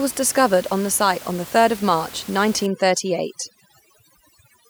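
A speech clip with room noise sitting about 19 dB below the voice until overdone noise removal takes hold from 2.66 s to the end. The suppression is so aggressive that the background noise drops and breaks up into twinkling specks, and the voice's quieter components are pulled down along with the noise. A noise gate would instead mute the whole signal at once, leaving clean gaps rather than this glittering residue.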